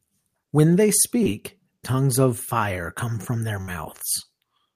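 At 1.23 to 1.27 s, just before "tongues of fire come", there is a short concealed packet loss. About 20 ms of audio never arrived, and the receiver covered it by extending the preceding sound for 18 ms. The result is a brief smear rather than a gap.

From 3.61 to 3.69 s, right after "fire come from their", there is a burst of packet loss. About 60 ms went missing, and the receiver held the last sound for 63 ms while fading it. Unlike the earlier blip, this one is a sustained, dying tail, and the speech then resumes with a stretch skipped.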